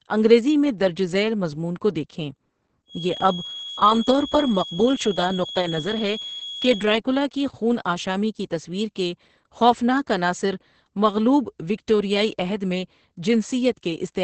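Opus voice compression runs through the whole of this speech clip. Nothing is present above 8.5 kHz, and the voice sounds muffled, hoarse and slightly robotic. The sound points to Opus's SILK linear-prediction coder running in wideband at a low rate, around 10 kbps. At that rate the codec keeps only a coarse model of the excitation, so the voice's natural texture is lost and the damage is heavy. A feedback whistle runs from 2.85 s, just after "کو دیکھیں", to 6.93 s, ending just before "کی خون آشامی کی". It is a thin, steady tone at 3.3 kHz sitting well below the speech, and its level swells and fades slowly. The likely cause is a loudspeaker-to-microphone loop held right at the edge of feedback, so that single frequency keeps ringing without building up into a howl.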